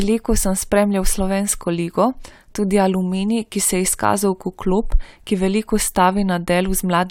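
No technical faults can be heard anywhere in this speech recording. Nothing in the sound changes in a way that points to a problem in the recording or playback chain.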